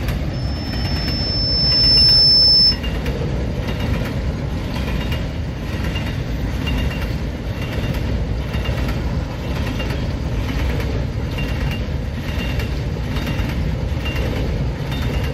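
From 0.33 to 2.80 s a piercing tone at 5.3 kHz swells over roughly a second and a half into a squeal standing well above the sound. This is loudspeaker feedback squeal: the microphone re-captured its own loudspeaker, and loop gain exceeded unity at that frequency.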